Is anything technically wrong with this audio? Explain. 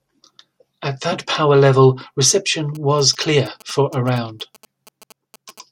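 Yes. From 2.75 s to 5.59 s, just after "that power level reception", there are GSM signalling bursts. A nearby 2G phone appears to be exchanging short groups of radio bursts with its network. The audio circuitry rectifies that RF, turning its 216.7 Hz pulse rate into an audible signal. The result is a galloping dit-dit-dit of brief 217 Hz buzzes running under the speech, around 25 dB below it.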